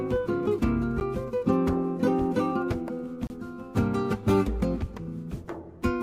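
Two blocks of digital silence break the sound: a 10 ms dropout at 1.0 s that registers as a tick, and a longer 30 ms hole from 3.27 to 3.30 s that is heard as a brief gap. In each, the sound cuts out abruptly to silence and returns with no fade. This points to output buffers left unfilled in time. On a waveform each appears as a flat line; a spectrogram shows a blank vertical stripe.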